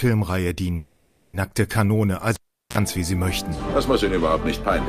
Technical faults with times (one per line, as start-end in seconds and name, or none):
0.75-1.35 call audio freeze
2.35-2.78 cable pulled and plugged in